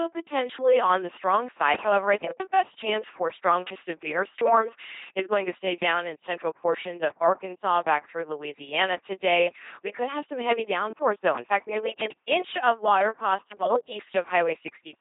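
From start to finish the speech carries the sound of an LPC-10 vocoder, heavily damaged. Each instant is synthesised either from a pulse train or from noise, so the speech comes out as a buzzing, mechanical robot voice. Where the voiced/unvoiced choice goes wrong, there are stray buzzes or hiss. A short-order all-pole filter stands in for the vocal tract, and nothing is present above 3.8 kHz. The sound fits a 2.4 kbit/s parametric coder.

From 7.75 to 7.82 s, just before "back through", there is a loose connector crackle. A worn or dirty contact is making and breaking rapidly, which chops the signal for those 70 milliseconds. The interruptions are heard as an irregular burst of scratchy crackle laid over the vocoded speech, ending just as those words begin.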